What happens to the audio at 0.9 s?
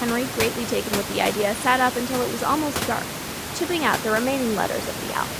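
Nothing goes wrong at 0.9 s: the speech plays through intact, with only the ordinary background noise of the room sitting below it.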